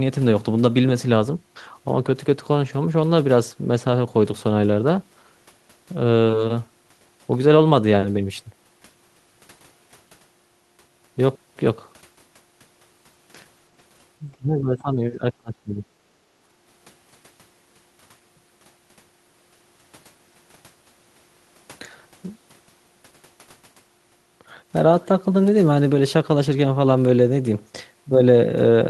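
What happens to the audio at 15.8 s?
At 15.8 s you're right at the tail of a stretch of speech suppressed in double talk, running from 14.37 to 15.84 s. The speech dips and breaks up, falling by about 25 dB at its worst, for roughly a second in total. The likely cause is an echo canceller that couldn't separate this talker from the far-end echo while both were talking, so it turned both down.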